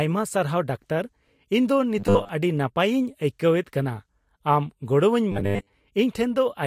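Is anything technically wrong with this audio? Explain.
Yes. Two short stretches of this speech clip, 1.99 to 2.29 s and 5.32 to 5.73 s, collapse into robotic sound from repeated short buffers. The voice becomes a rigid, metallic 100 Hz buzz that still loosely tracks the words. The likely cause is audio arriving too seldom, so a 10 ms chunk is replayed to fill the gaps while most of the real signal is skipped. Unlike distortion or a flanging effect, the buzz sits at a fixed rate.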